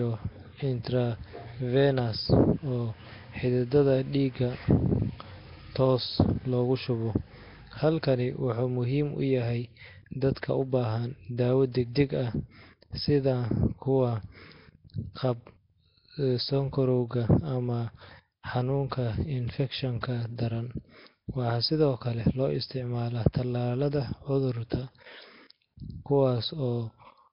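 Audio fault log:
Throughout, Nellymoser compression: heavy block-coding damage gives a rough, hissy, underwater halo with nothing above 5.3 kHz, fitting a roughly 22 kbps stream, likely Nellymoser Asao.
20.01–20.03 s and 24.70 s, pre-echo: hiss of 22 ms and 18 ms precedes sharp attacks because block-wide quantisation noise fills the quiet before them, smearing the onsets.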